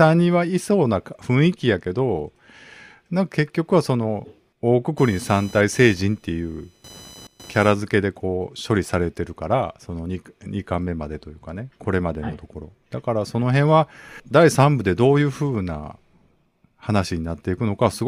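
Speech, with a patch of computer activity noise from 4.98 to 7.72 s: a buzzy, chirping whine pulsing at around 1 kHz, roughly 25 dB under the voice. It's the machine's load shifting the shared ground, so it tracks the computer, not the talking.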